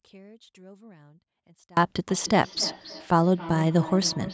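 From 0.0 to 1.77 s the speech drops by about 30 dB to a faint residue, most likely because one channel is inverted and cancels the other when summed to mono. From 2.1 s to the end, a feedback echo between two devices returns each word roughly 300 ms later, peaking about 16 dB below the speech.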